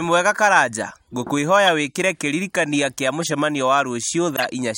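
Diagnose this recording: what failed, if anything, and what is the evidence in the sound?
Corrupt frame decoded at 1.66 s, 3.21 to 3.29 s and 4.36 to 4.44 s: brief blips and noise bursts over the speech, the later two reaching about -5 dBFS. In the codec, frames with flipped bits were decoded anyway, misplacing energy across a few frames each.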